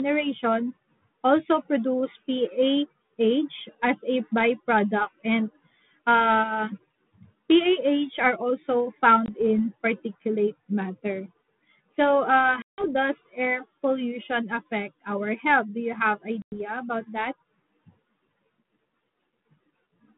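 Packet loss on an ADPCM call cuts hard-edged silent holes at 9.26 s, after "are also", 12.62 s, before "does air pollution affect", and 16.42 s, after "you have". The holes are 20 ms, 160 ms and 100 ms. Afterward, the decoder's predictor is out of step, so the audio returns slightly distorted before settling.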